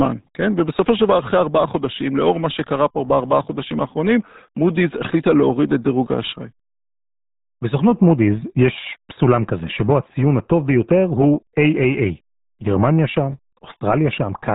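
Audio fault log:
throughout: RealAudio 14.4 codec. The speech is cut off sharply above 3.8 kHz and sounds muffled and gargly, with bubbling, smeared consonants that fit a coarse rate near 8 kbit/s. That heavy gargle, not mere dullness, sets it apart from a simple low-pass filter.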